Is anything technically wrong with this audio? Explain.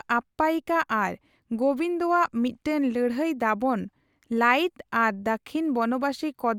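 No, there are no technical faults to report in this speech recording.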